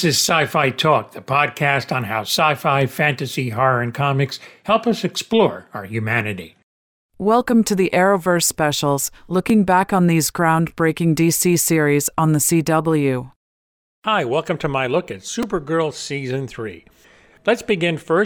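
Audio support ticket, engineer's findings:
Brief click at 9.50 s before "back on these groundbreaking", short buzz at 15.43 s after "to my look at". Repeated buffer: playback device replayed a 2.9 ms block, consistent with a 128-sample buffer, once then three times, when new audio arrived late.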